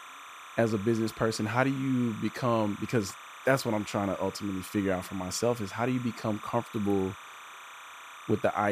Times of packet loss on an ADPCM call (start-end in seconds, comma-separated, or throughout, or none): none